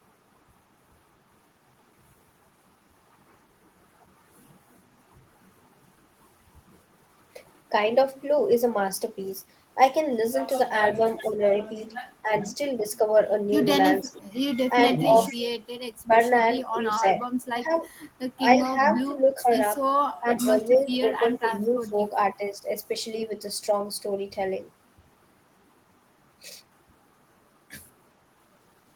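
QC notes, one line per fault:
10.94–13.0 s, 14.01–17.72 s, 19.05–22.65 s: speech suppressed in double talk. The talker's voice dips in pieces, about half a second in total in the first stretch and roughly a second and a half in each of the others. The deepest drops are about 10 dB in the first and third and about 25 dB in the second. This is likely an echo canceller that could not tell the near talker from loudspeaker echo while both sides spoke, and so attenuated everything.
10.95–11.27 s, 12.42–12.9 s, 15.0–15.35 s, 17.75–17.8 s, 20.75–21.39 s: echo leak. A faint delayed copy of the voice trails 442 ms behind, sitting about 20 to 25 dB below the direct speech. It appears as short scraps clustered in and around the double-talk stretches, with the briefest one at 17.75 s. It likely comes from a loudspeaker at the far end whose canceller left part of the microphone pickup unremoved and sent that residue back down the line.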